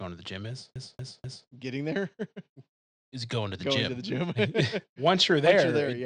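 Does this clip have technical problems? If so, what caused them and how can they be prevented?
Yes. From 0.74 to 1.48 s the speech hits a CD stuck on one turn: the same 0.25 s of audio plays three times, with a short mute at each jump. A scratch is sending the laser back one track at the same spot on every rotation, so the stutter is fast and evenly spaced. The brief silence at each jump and the strict regularity set it apart from a streaming buffer repeat. Clean or replace the disc, or rip it with error-correcting software.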